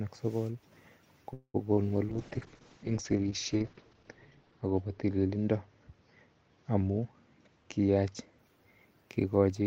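At 1.33 s the sound stalls for about 0.23 s, a call audio freeze. The last sound is stretched into a fading buzz that ends in roughly 80 ms of silence before the audio resumes where it left off, with nothing lost. The likely cause is packets held up in transit until the jitter buffer ran dry. On a spectrogram the final frame smears into flat horizontal bands that fade to blank, and the waveform shows a decaying tail, then a flat line.

Shortly after, at 1.74 to 1.79 s, comes a short concealed packet loss. About 20 ms of audio never reached the decoder in time, and the receiver bridged the hole with 28 ms of synthesized continuation before crossfading back. It is heard as a brief smear or wobble. The spectrogram shows a narrow column where the harmonic detail blurs, and the waveform has a short stretch of unnaturally uniform cycles.

From 2.11 s to 8.43 s a call bitrate drop takes hold. The encoder's rate falls from 48 kbps to 7 kbps and sits at its lowest for about 1.7 s. 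Bandwidth narrows from 20 kHz to 8 kHz, so the sound turns muffled and watery, with coarse, grainy texture. A spectrogram shows everything above 8 kHz cut off sharply in a hard ceiling, with blotchy, quantized energy beneath it, until the full band returns.

Overlapping that, from 6.90 s to 8.79 s, a jitter buffer speed-up plays the audio at about 111% speed. The buffer was holding more audio than its target, so the receiver trimmed many short pitch-period slices, about a fifth of a second in total, to catch up. Pitch stays the same but the sound feels hurried. The waveform shows syllables packed closer together, and the spectrogram shows compressed timing with no shift in harmonic spacing.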